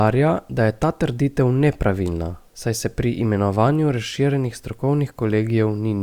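Listening to this speech recording, nothing stood out as a technical problem at any point.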